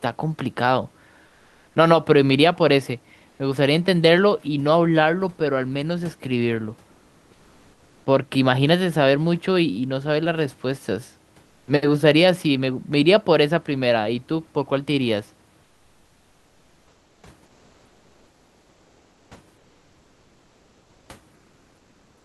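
Eight pauses in this speech get comfort noise in place of the background: at 1.27–1.75 s, 3.29–3.39 s, 6.91–8.05 s, 11.45–11.67 s, 15.63–17.23 s, 17.45–19.31 s, 19.57–21.09 s, and 21.35 s to the end. The real room hiss, sitting about 40 dB down, gets swapped for a flat, featureless synthetic hiss, sometimes level and sometimes up to about 6 dB quieter. That's likely Opus discontinuous transmission kicking in whenever the sender hears no speech.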